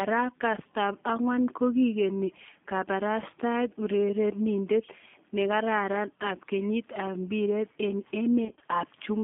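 Throughout, the speech carries a G.729 codec sound, consistent with the 8 kbit/s G.729A variant. Each 10 ms frame is rebuilt from a vocal tract filter, a pitch predictor and sparse pulses. The line band runs only from 200 Hz to 3.5 kHz. The result sounds plainly rough and synthetic.

From 8.45 to 8.64 s comes VoIP packet loss concealed by the speech codec. About 100 ms of audio goes missing in short gaps spread over 160 ms. The longest gap is 30 ms. The decoder fills each gap from its last pitch and filter. The sound is stretched into a buzzy tone or a coloured noise that fades, and it stays weakened as the frames recover.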